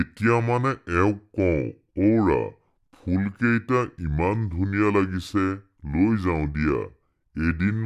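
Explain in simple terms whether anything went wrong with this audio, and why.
The speech sounds slow, heavy and deep from start to finish, running at about two-thirds normal speed and about 7 semitones low. This is a wrong sample rate fault: the audio is played slower than it was recorded, which fits 48 kHz audio played at 32 kHz.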